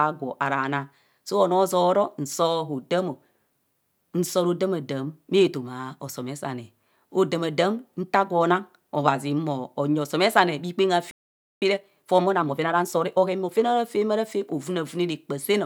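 At 11.11 s the speech cuts out abruptly in mid-flow and the output stays silent until 11.62 s, a gap of about 0.51 s. This is a playback stall, likely the player draining its buffer or having its output thread blocked so that no samples reached the device.

From 11.62 s to 13.64 s the player makes up the lost time with time-compressed catch-up. It removes short slices of the backlog and cross-fades the joins, so the speech runs at about 1.25 times normal speed while keeping its original pitch. The result sounds rushed, and normal pacing resumes after 13.64 s.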